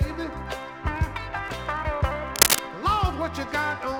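A short audio clip with one fault: cable scratch noise from about 2.29 s to 2.60 s. For roughly a third of a second, a dense, irregular burst of crackling and rustling sits well above the programme, on the order of 10 dB louder than the wanted sound. The likely cause is a worn cable, connector or control being disturbed, so that its contact resistance fluctuates rapidly and injects uneven noise into the signal path while it moves.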